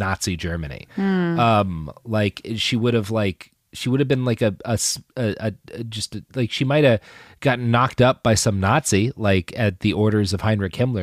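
No faults found in the speech; nothing to report.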